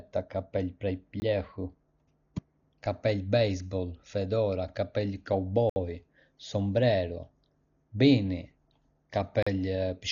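Throughout the speech, a heavily starved perceptual coder has thrown away much of the signal, most likely Dolby Digital compression at a rate that fits roughly 40 kbps. With so few bits, the encoder has narrowed the band so that nothing remains above 7 kHz, and many frequency lines carry no real detail, leaving the decoder to fill them with noise. The voice sounds dull and muffled, with a rough, fluttering haze clinging to its tones.

Three blocks of digital silence interrupt the audio, each where the output buffer was not filled in time or a calculation failed, so samples were replaced by zeros. The sound drops to dead silence and returns with no fade. The first, from 1.20 to 1.22 s, lasts 20 ms and is heard as a short hole. The second, from 5.70 to 5.76 s, runs about 65 ms and opens an audible hole. The third, from 9.43 to 9.47 s, lasts 40 ms and gives a short gap.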